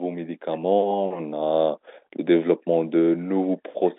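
Nothing goes wrong anywhere in this speech, which simply carries the familiar G.711 telephone sound, its band running from 250 Hz up to 3.7 kHz with nothing reaching past 3.8 kHz.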